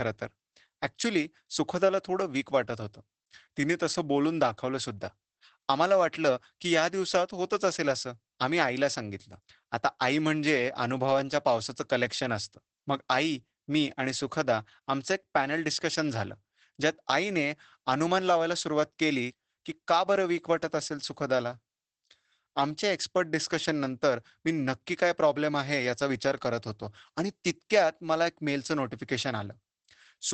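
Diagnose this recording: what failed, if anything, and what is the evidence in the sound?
Throughout the clip the speech sounds muffled and slightly hoarse, with a faintly robotic edge. Nothing is heard above about 8 kHz, so sibilants lose their bite. The fault is in the codec stage: Opus voice compression in its SILK linear-prediction mode at wideband. The coarse excitation coding causes the roughness, and the 8 kHz ceiling causes the dullness. The plainly audible damage fits a low bitrate around 12 kbps with 20 ms frames.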